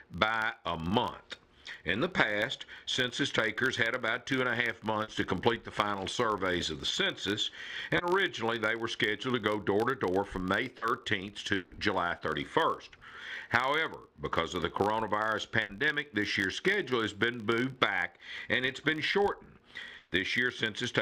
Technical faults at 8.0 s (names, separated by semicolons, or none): filter restarted on every block; short concealed packet loss